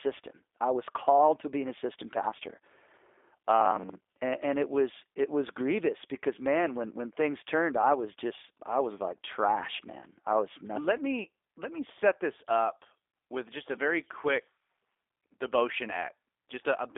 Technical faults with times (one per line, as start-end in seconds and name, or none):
0.00-16.98 G.729 codec
3.61-4.21 robotic sound from repeated short buffers